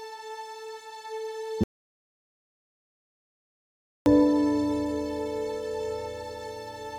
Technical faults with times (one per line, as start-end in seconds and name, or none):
1.64-4.06 audio dropout to silence